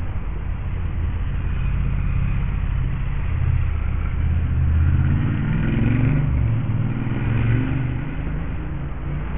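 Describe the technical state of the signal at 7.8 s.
At 7.8 s the top end sounds gritty and metallic, with spurious tones at pitches unrelated to the sound itself, and the spectrum runs hard up to a wall near 3 kHz. This is aliasing, and it is present throughout the clip. It fits a rate drop to around 6 kHz with no anti-alias filter. Content above 3 kHz folded back below it and sits at roughly 25 dB under the signal.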